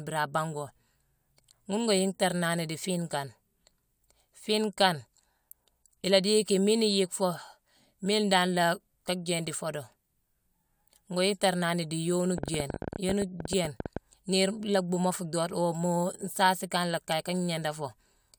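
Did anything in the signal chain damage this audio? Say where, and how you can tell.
Yes. A train of clicks, roughly 20 irregular pulses at 13.9 per second and about 10 dB above the speech, runs 12.38 to 13.98 s, likely from interference on the analogue wiring.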